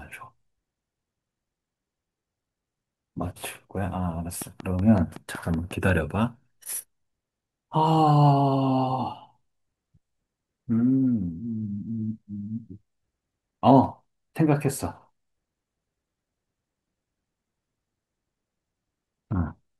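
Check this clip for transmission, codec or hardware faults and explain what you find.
There is one fault, a train of clicks from 4.42 to 5.90 s. Interference from nearby equipment or a faulty connection or power supply is likely injecting a pulse about 5.4 times per second. The result is about ten evenly spaced, similar clicks, each peaking roughly 5 dB above the speech, heard as steady ticking over the sound.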